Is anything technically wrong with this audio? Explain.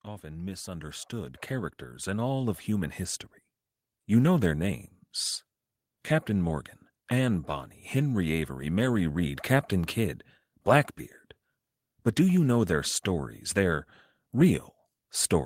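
Yes. From 0.3 to 3.03 s there is automatic gain rising. The gain control judged the input too quiet and lifted its gain by about 10 dB. The speech and the background noise swell together over those few seconds.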